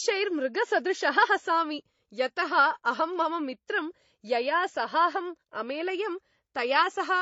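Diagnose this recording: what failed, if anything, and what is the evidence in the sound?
Codec stage: the speech is hard-limited to 7.7 kHz throughout, with two layers of smeared, warbling artefacts. Each encoder adds its own, and the lowest cut-off survives. This fits likely transcoding between lossy codecs, low-rate MP3 into HE-AAC. A spectrogram shows a flat ceiling and patchy bands.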